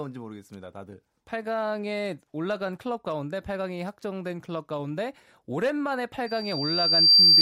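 From 6.26 s to the end, loudspeaker feedback squeal: a 4.7 kHz loop tone swells over roughly a second until it sits about 15 dB above the speech.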